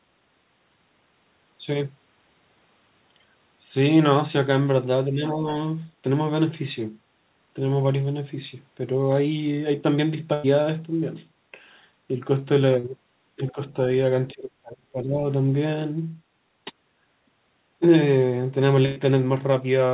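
Speech heard over a call link, band-limited with nothing above 4 kHz, which fits a G.711 mu-law path at 64 kbps. Three stretches show speech suppressed in double talk. At 5.08 to 5.46 s the voice dips by about 5 dB for roughly a third of a second. At 13.36 to 13.57 s it drops by about 10 dB for around a tenth of a second. At 14.34 to 15.22 s it sinks by about 30 dB, nearly vanishing, for most of that span. The likely cause is the echo canceller. With both ends talking at once, it could not tell this talker from the loudspeaker echo and turned everything down. There are two bursts of packet loss. The first runs from 10.34 to 10.45 s, and the second from 18.85 to 18.98 s. Each removes about 100 ms of audio. In both, the receiver stretches the last sound it had and fades it out. That leaves a held buzz or hiss in place of the lost sound. The speech then resumes further on, with the middle gone. 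At 12.79 to 12.85 s there is a short concealed packet loss. About 40 ms failed to arrive in time. The decoder patched the hole by continuing the preceding sound and blending back into the real signal. The result is a brief smear, where a quick sound can disappear.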